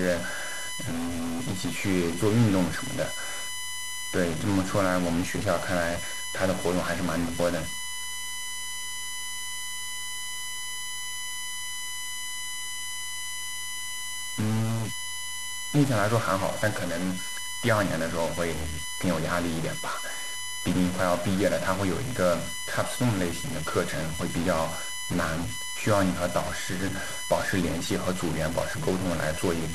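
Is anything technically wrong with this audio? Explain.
Yes. Two faults run through the whole speech clip.

USB whine: a steady tone at 1 kHz, strongest at its 2 kHz harmonic, sits about 20 dB below the speech. Current drawn in 1 ms USB frames leaks into power or ground. On a spectrogram it shows as unbroken horizontal lines.

Stuck bit: harsh, buzzy distortion rides on the speech, and the pauses fill with hiss instead of falling silent. The likely cause is one data bit held at a fixed value, offsetting samples by a step of around -30 dBFS. The waveform shows jagged offsets even where it should be flat.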